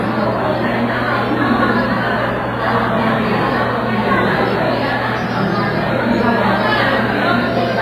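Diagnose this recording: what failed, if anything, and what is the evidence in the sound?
Throughout the recording the sounds ring and smear, with a washy, breathing hiss that swells and fades with the signal, and nothing is present above 15.5 kHz. The failure sits at the codec stage, most likely WMA compression at a low bitrate, which fits around 24 kbps. Long transform blocks spread quantisation noise over tens of milliseconds around each event, while weak spectral lines are zeroed, so the damage is heavy and audible everywhere.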